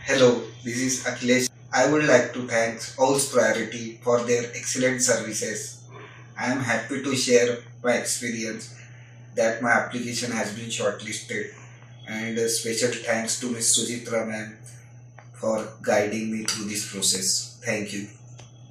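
Nothing in this recording stands out as a technical fault; there are no dropouts, clicks, glitches or distortion to point to anywhere along the way.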